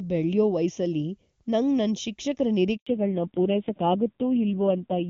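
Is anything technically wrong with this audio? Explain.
Yes, there are three faults.

Throughout the clip there is channel delay causing comb filtering. One channel arrives roughly 0.3 ms late, and the mono sum cancels at evenly spaced frequencies, with the first notch around 1.5 kHz. The speech sounds hollow and phasey. Unlike a bandwidth loss, the damage is a series of repeating notches, not a ceiling.

From 2.77 to 2.87 s there is a handover gap. While the call switched networks, no speech frames arrived for 100 ms. The voice fades out quickly and then stays fully silent. That dead silence distinguishes it from packet-loss concealment, which would smear or repeat the preceding sound instead.

From 2.87 s to the end there is a fallback to narrowband. Before this point the HD Voice coding sounds clean, consistent with AMR-WB at 23.85 kbit/s. Afterwards nothing above 4 kHz remains, consistent with AMR-NB at about 5.9 kbit/s. 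The speech turns dull and rough. Unlike the comb notches, this is a sudden, permanent upper cutoff.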